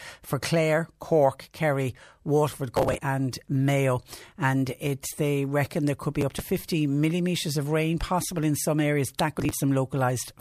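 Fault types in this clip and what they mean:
processor overload crackle: the processor misses its deadlines and drops tiny buffers of roughly 5 ms, giving three short crackle bursts. The waveform shows hard-edged gaps, and the spectrogram shows thin vertical broadband streaks.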